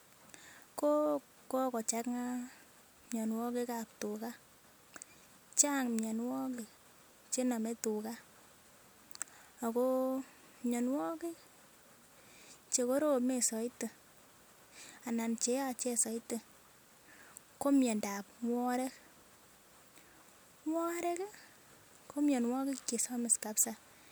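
No technical faults can be heard in the speech recording. There is nothing here that needs a time or an explanation.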